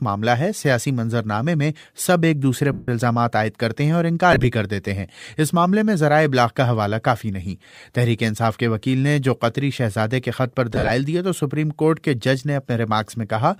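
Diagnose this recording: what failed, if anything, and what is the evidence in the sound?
The failure is lost LE Audio frames on the Bluetooth wireless link, covered up by the LC3 decoder's concealment. From 2.73 to 2.88 s, 150 ms is missing in one block. The sound turns into a noisy smear and starts fading. At 4.32 to 4.45 s, the losses come in short runs scattered over 120 ms. At 10.73 to 10.90 s, they spread over 165 ms, with the longest run about 50 ms. The decoder repeats the last spectrum with random signs, so tones blur into noise. The gap lengths fit 7.5 ms frames. The light codec coding itself leaves at most a faint watery texture on noise and attacks.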